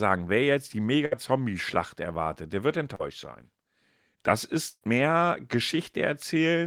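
Burst of packet loss at 1.05 to 1.13 s, after "wer jetzt die": about 60 ms of lost speech is bridged by a fading continuation of the last sound, then resumes further on.

Short concealed packet loss at 2.95 to 3.01 s, after "erwartet der wird": roughly 40 ms is patched from the preceding sound, heard as a brief smear.

A second burst of packet loss at 4.69 to 4.83 s drops about 120 ms. The last sound decays away and then 40 ms of silence follows before the audio returns.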